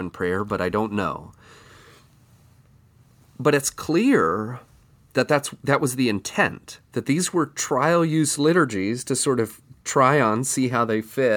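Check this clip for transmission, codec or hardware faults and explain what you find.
No transmission, codec or hardware fault can be heard anywhere in the speech. There is nothing here that calls for a timing or a mechanism.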